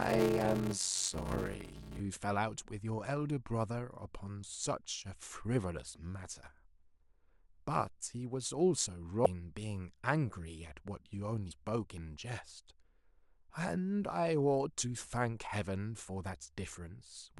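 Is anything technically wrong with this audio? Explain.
Yes, there are two faults. From 0 to 2.0 s the speech carries a steady buzz near 94 Hz and drags at 0.625 times normal speed. This is a block size mismatch (padded): short written blocks, which fits 320-sample writes into 512-sample reads, are zero-filled, inserting a gap every block. Brief glitches at 6.46 to 6.48 s, 9.25 s and 11.50 to 11.52 s come from damaged data in a compressed stream, where the decoder misreads corrupted frames, loses sync and hunts for the next header.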